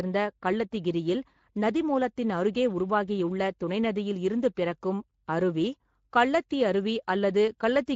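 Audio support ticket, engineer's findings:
Speex codec damage throughout, plainly audible. Speech sounds hoarse and noisy. CELP excitation is coarsely coded. Fits a Speex setting of about 16.8 kbps.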